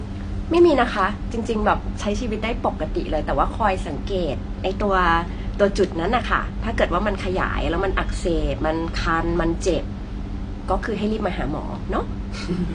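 Throughout, the speech is dull and smeared with a fizzy edge, likely AAC compression near 32 kbps; a spectrogram shows a hard ceiling at 9.8 kHz.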